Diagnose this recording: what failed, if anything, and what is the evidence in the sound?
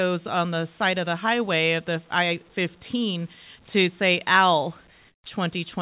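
Call processing is the stage at fault: comfort noise in place of the background. From 5.08 to 5.24 s, a 160 ms stretch of the quiet background, already about 35 dB below the loud passages, is replaced by a steady, featureless hiss about 11 dB quieter than the real room sound. This is likely discontinuous transmission: the sender's voice detector stopped sending audio, and the receiver filled the gap with synthetic noise until the sound resumed. The band-limited audio, with nothing above 4 kHz, fits a G.711 A-law call path.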